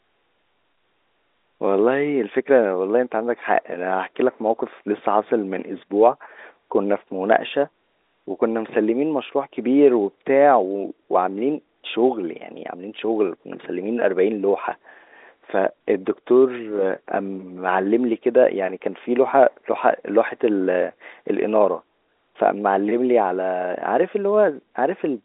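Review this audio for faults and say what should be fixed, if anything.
Nothing here needs fixing; the speech comes across as a normal telephone-band G.711 line, topping out around 3.8 kHz as that format does.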